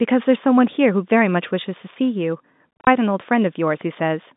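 From 2.77 to 2.87 s the speech stutters with holes up to 30 ms long. This is packet loss filled with silence, blanking about 120 ms of signal in all.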